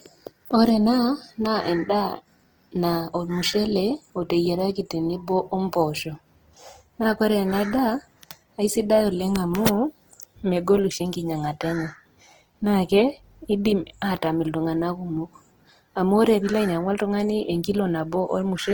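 It's a speech clip with Opus compression damage plainly audible from start to finish: a grainy, rough texture that turns tonal parts noisy. It's likely Opus in music mode at a low rate, around 16 kbps, filling starved bands with folded or noise content. The bandwidth stays full, reaching about 20.2 kHz.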